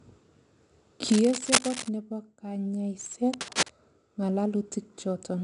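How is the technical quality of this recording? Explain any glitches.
The quality is noticeably compromised. There's coding grit throughout and two scratchy bursts.

Throughout the speech you can hear 4-bit ADPCM compression. Each coarse 4-bit step leaves a gritty hiss that rides the level, the content stops at 10.6 kHz, and the sound fits roughly an 89 kbps stream.

From 1.08 to 1.89 s and again from 3.33 to 3.72 s there's cable scratch noise, dense uneven rustling about as loud as the speech. It's likely from a worn cable or connector being moved, with its contact resistance jumping around.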